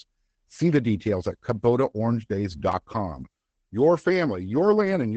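A speech clip with Opus voice compression throughout: at 12 kbps in SILK wideband mode it sounds muffled and hoarse, with nothing above about 8.8 kHz. The roughness separates it from a plain lowpass filter, which would only dull the sound. At 2.72 s a repeated buffer plays one short piece twice, giving a brief click-like stutter. Each pass lasts about 11.6 ms, which fits a 512-sample buffer. Unlike a dropout there is no silence, though around 10 ms of audio is lost.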